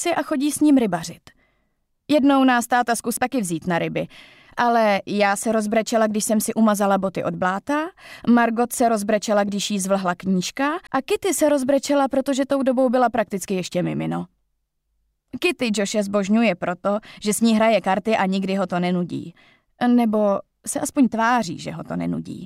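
At 3.17 s and again at 10.87 s, the audio is hit by a CD skip. The laser jumped to another turn of the disc's spiral. Playback mutes very briefly, under about 15 ms, then carries on from a different point. Each sounds like a tick followed by an abrupt jump.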